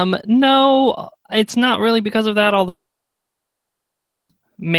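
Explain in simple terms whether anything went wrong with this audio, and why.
At 2.68 s the speech breaks off, a brief fading buzz continues the last sound, then near-silence holds until 4.30 s. That 1.6-second gap is a long network dropout: audio likely stopped arriving, and the missing part never returns.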